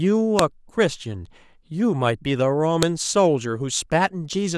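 At 0.39 s and again at 2.83 s, a file header played as audio produces a sharp, loud click: leftover WAV header bytes decoded as samples, visible as a narrow spike and full-height vertical line.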